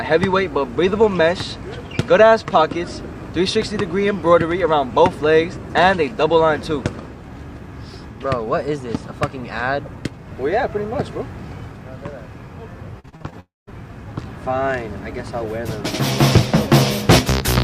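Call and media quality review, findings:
Repeated packet loss (robotic sound), 12.99 to 13.34 s. Choppy stretch. Six short gaps, longest 44 ms, about half the span patched by the jitter buffer's concealment.

Fading buzz or hiss, then silence, 13.40 to 13.69 s. Likely a long network dropout. Concealment extends the last sound before 180 ms of silence. Audio resumes with that section missing.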